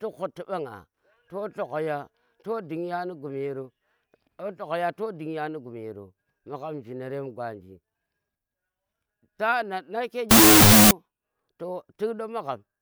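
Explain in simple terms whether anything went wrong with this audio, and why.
From 10.31 to 10.91 s the speech collapses into loud, harsh noise with a slowed, deepened trace of the speech buried inside. This is a wrong sample width fault. The pattern fits audio stored as 16-bit numbers but read back as unsigned 8-bit ones, so each real value is split into mismatched pieces. That doubling also makes the sound play at half speed, an octave lower. A simple noise burst wouldn't carry that slowed, lowered speech inside it.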